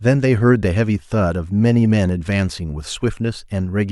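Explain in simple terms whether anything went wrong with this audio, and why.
Nothing went wrong with this speech recording. Listening all the way through, no technical fault can be heard at any moment.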